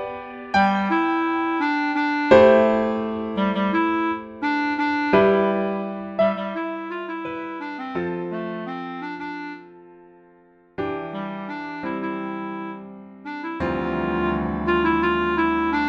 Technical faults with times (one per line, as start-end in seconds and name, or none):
5.72-6.83 zipper noise
13.80-14.37 zipper noise